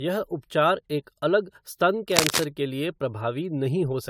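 A speech recording that sounds swirly, hollow and smeared throughout, with blurred attacks, pointing to generation loss, likely from about five successive AAC-LC encodes at 96 kbit/s. From 2.12 to 2.45 s, between "उपचार एक अलग स्तन" and "के लिए", dense scratchy rustling roughly as loud as the speech cuts across it, which sounds like cable scratch noise from a worn connector or lead being moved.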